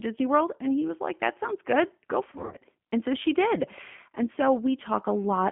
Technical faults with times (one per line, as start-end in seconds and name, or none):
0.00-5.51 G.729 codec
2.31-2.61 VoIP packet loss concealed by the speech codec